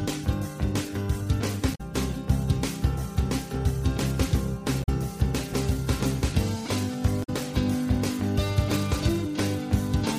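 At 1.71 to 1.81 s, 4.80 to 4.89 s and 7.20 to 7.29 s there are three short bursts of damaged data in a compressed stream, each lasting roughly 95 ms. Bytes in the encoded stream were corrupted at these points, so the decoder misread the affected frames, lost sync and had to hunt for the next valid frame header. Each event is heard as a brief chirp or blip that breaks into the surrounding audio.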